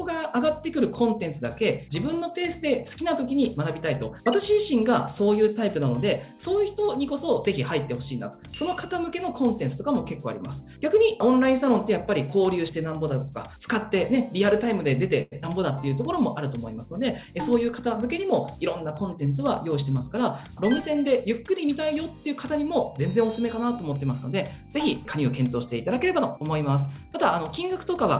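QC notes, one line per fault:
15.22 to 15.34 s, short stall from a late packet: a packet arrived late and the jitter buffer ran dry, so the receiver held the last sound for about 96 ms and then resumed from exactly where it left off. Nothing is lost, but the sound at that point is drawn out, with a faint buzz or dip while it is sustained. The delay through the call rises by the same 96 ms from here.
15.42 to 15.45 s, short concealed packet loss: about 40 ms of audio never reached the decoder in time, and the receiver bridged only a brief 10 ms with synthesised continuation before blending back into real audio. The rest of the gap is simply dropped, pulling the delay back by roughly 30 ms. It comes across as a short smear or wobble, and a brief sound in that span can disappear entirely.
17.27 to 19.04 s, jitter buffer speed-up: with more audio queued than the target, the receiver trimmed short pitch-period-sized slices repeatedly to work the backlog down, removing roughly a tenth of a second in total. 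Playback runs at about 105 % speed with pitch unchanged, so this stretch sounds slightly hurried and its timing is compressed. The G.711 A-law path, with nothing above 4 kHz, stays audible throughout as its narrowband coding.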